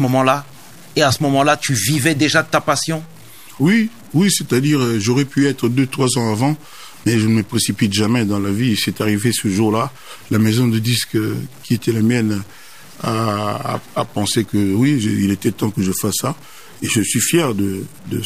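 Low bit depth without dither runs through the whole speech clip: quiet passages turn gritty and the softest tails sputter or drop out, with grainy distortion tracking the voice at about 30 dB below it. This is likely truncation to roughly 7 bits, where the rounding error follows the signal.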